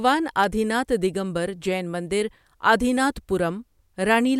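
A nearby switch, motor or static discharge likely arced and coupled a brief burst of energy into the audio line of this speech clip, producing an electrical switching spike at 0.44 s, just before "آدی ناتھ دگمبر جین". The disturbance lasts only a few milliseconds, so it lands as a sharp snap sitting on top of the sound rather than blending into it, peaking at about -20 dBFS.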